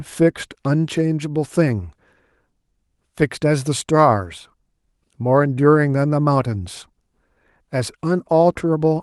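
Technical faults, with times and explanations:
No technical faults can be heard in this recording, with times and explanations not applicable.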